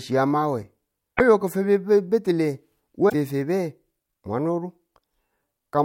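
Damaged data in a compressed stream breaks into the speech twice: from 1.14 to 1.21 s and again from 3.09 to 3.15 s, each lasting about 60 ms. In both places the bytes of the encoded stream are corrupted, so the decoder misreads those frames, loses sync and has to hunt for the next valid frame header before normal decoding resumes. Each gap comes out as a brief chirp, squawk, click or short hole cutting across the speech.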